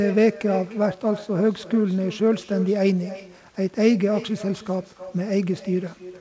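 A speech recording carried over a call path that passes nothing above 8 kHz, consistent with G.722 wideband coding, has echo with no canceller throughout the clip. Each phrase returns roughly a third of a second later as a quieter, thinner copy about 15 dB down, because the far end's loudspeaker feeds its microphone and nothing subtracts it. Unlike room reverberation, the copy is a distinct delayed repeat, not a smooth tail.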